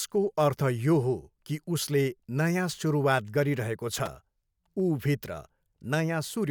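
At 3.95 s, just after "उसले नयाँ सुरुवात गरिरहेको", processor overload crackle tears through the speech until 4.07 s. The processor misses several deadlines in a row. Each short buffer, about 3 ms, replays stale audio with hard edges. The result is a gritty burst.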